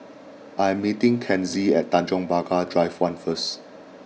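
Nothing in the recording stood out as a technical fault on listening.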